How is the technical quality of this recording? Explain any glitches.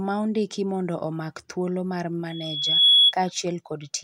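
There's one real problem in the speech: a loudspeaker feedback squeal from 2.30 to 3.14 s, a 3.4 kHz tone swelling over roughly half a second to well above the voice as mic-to-speaker loop gain tops unity.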